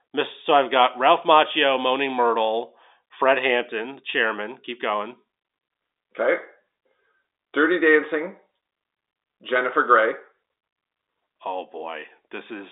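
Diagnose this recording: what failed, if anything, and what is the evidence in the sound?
Nothing failed in this recording; the speech comes through the narrow band of G.711 telephone coding, with nothing above 3.8 kHz, which is that telephone line working as designed.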